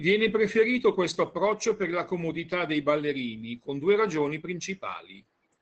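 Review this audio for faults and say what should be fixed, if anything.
Opus voice compression runs through the whole clip: the speech band stops near 8.2 kHz, and the coarsely coded SILK excitation makes voicing sound hoarse and faintly robotic, which fits a low bitrate around 12 kbps. Unlike a plain low-pass filter, which only dulls the sound, this adds grainy texture. Prevent it by encoding at a higher Opus bitrate or keeping an uncompressed master.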